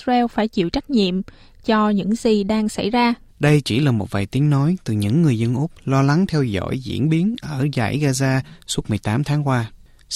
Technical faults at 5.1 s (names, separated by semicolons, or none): none